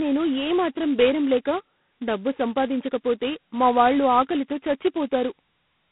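G.726 ADPCM damage runs through the whole clip: the speech is band-limited to roughly 150 Hz to 3.4 kHz with nothing above 3.8 kHz, and a harsh, rasping hiss rides on every syllable, rising and falling with the level, which fits heavy coding at 16 kbit/s.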